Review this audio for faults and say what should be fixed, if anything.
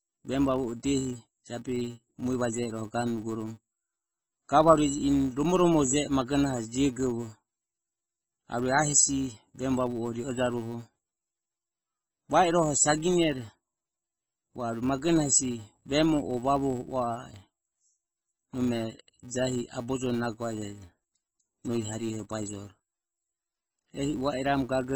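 MP3 compression runs throughout, from start to finish. The treble is cut off, and the speech sounds watery and swirly, with smeared consonants. This heavy damage is likely from MP3 encoding at a very low bitrate, around 16 kbps, where the encoder drops the treble and lets weak frequency lines flicker between frames. Prevent it by encoding at a much higher bitrate or keeping an uncompressed master.

A filter restarted on every block produces a steady buzz at 345 Hz across the whole clip. The filter starts each block from silence, so every block opens with a small transient. The repeat rate fits a 128-sample block, and the buzz rises and falls with the speech level. Prevent it by carrying the filter's state from one block to the next instead of resetting it.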